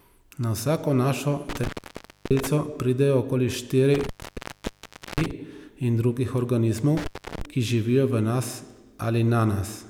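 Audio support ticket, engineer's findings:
Intermittent contact at 1.49–2.47 s, 3.94–5.31 s and 6.97–7.45 s. Speech drops out for about 0.63, 1.08 and 0.35 s, crackling at edges. Loose cable or plug opening.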